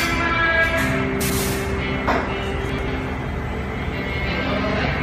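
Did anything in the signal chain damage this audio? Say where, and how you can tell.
Yes: chunks out of order, at the driver or buffer stage, between 1.21 and 1.39 s and again between 2.69 and 2.88 s. Each time a block of about 93 ms was written one block late, so it plays after the block that should follow it. Nothing is missing, but the swapped pair makes a brief jumbled moment, with three hard joins at each swap.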